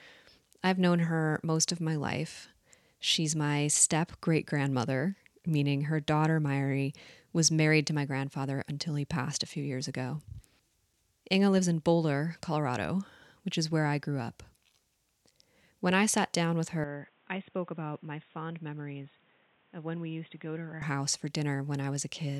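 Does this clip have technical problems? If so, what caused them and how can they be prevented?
Yes. From 16.84 to 20.82 s the speech turns boxy with nothing above 3.8 kHz, drops about 10 dB and gains new background noise roughly 30 dB down. The likely cause is the input switched to a poorer device, since a filter alone wouldn't change level and noise floor too. Locking the recording to one fixed microphone prevents it.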